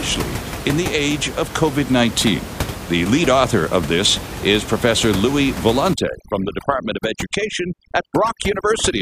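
Overdone noise removal runs from 5.94 s to the end. A noise reducer set too strong shuts off frequency bands near its noise estimate, so room noise about 10 dB below the speech drops and breaks up into twinkling specks.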